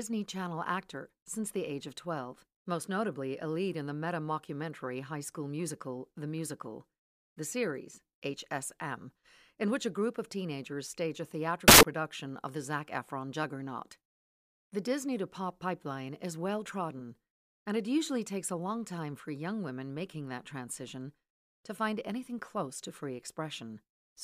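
Samples built from the wrong bytes, from 11.68 to 11.83 s, just after "of teenagers stage a" and before "of the". For about 0.15 s the reader assembles each sample from misaligned or swapped bytes, so the rapidly changing low-order bits land in the high-order position. The speech gives way to a burst of loud, harsh broadband noise, then cuts back to clean audio.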